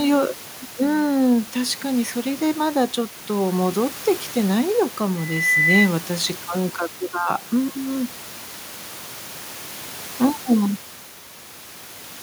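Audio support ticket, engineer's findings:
Loudspeaker feedback squeal, 5.18 to 5.91 s. A single 2 kHz tone rises out of the speech over about a third of a second and peaks a few dB above the talker. Probable component is the mic-to-PA path, with loop gain over unity at 2 kHz so that tone runs away until the amplifier limits it or the loop breaks. Room noise sits about 20 dB under the speech. Suggest pulling gain or notching near 2 kHz, and checking mic placement relative to the speakers.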